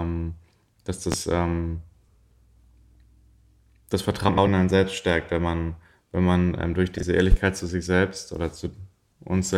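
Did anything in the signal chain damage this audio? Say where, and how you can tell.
Yes. Two loud pops sit on the speech at 1.12 s and 7.32 s. Each is a single sharp hit lasting about 40 ms, well above the speech level. The speech continues underneath. This is likely an electrical step in the analogue wiring, such as a plug or switch transient.

Three spots have frames out of order: 2.08 to 2.17 s, 4.28 to 4.47 s, and 6.98 to 7.03 s. Each stretch flutters, with its two halves swapped. The swapped blocks are 46.4, 92.9 and 23.2 ms, which fits a network or storage fault that reorders codec frames.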